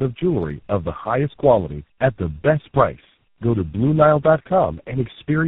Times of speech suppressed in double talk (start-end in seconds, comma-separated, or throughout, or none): none